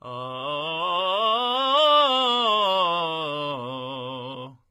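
Throughout the music, the treble sounds synthesized and gritty, with nothing above 14.5 kHz, likely HE-AAC compression at a low bitrate, fitting about 20 kbps, rebuilding highs from copied lower bands.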